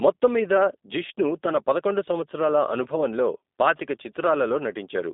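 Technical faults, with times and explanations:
Throughout, G.729 codec: the line band runs 250 Hz to 3.7 kHz, nothing above 3.8 kHz, and there is rough, synthetic pulse-excited texture, fitting an 8 kbit/s G.729A encode. On a spectrogram the top is cleanly cut off and the harmonics look smeared.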